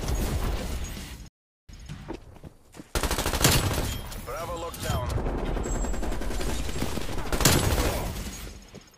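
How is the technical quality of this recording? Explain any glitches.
There's one real glitch here, a playback stall. At 1.28 s the sound just drops out to silence and doesn't return until 1.69 s, a gap of about 0.41 s. That's the classic signature of the player likely running dry of buffered data, or of its audio thread getting blocked for a moment, so nothing reaches the output until it catches up. You hear it as the audio cutting off mid-flow, a clear hole, and then picking back up.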